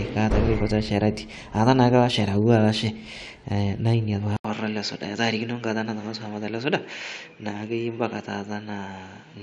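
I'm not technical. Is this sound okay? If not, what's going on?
No, the speech changes character at 4.37 s, after a brief gap of about 80 ms. It turns duller, with nothing above 7.4 kHz, and a faint new hiss, at the same loudness. That's likely an input switched to a poorer device, such as another microphone.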